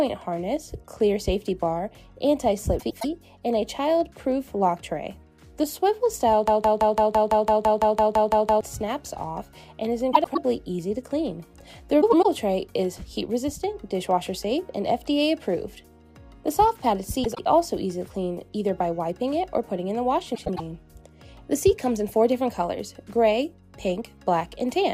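At 2.79 to 3.05 s, frames arrive out of order. Two neighbouring runs of about 105 ms swap places, which fits four-frame runs. The stretch flutters. No time is lost.

From 6.48 to 8.61 s, a broken-record loop takes over. A 0.17 s fragment repeats back to back, 13 times. A stalled stream likely kept resending its last piece. The audio meant for that span is gone.

The same frame swap returns at 10.13, 12.01, 17.24 and 20.35 s, each lasting about a quarter second.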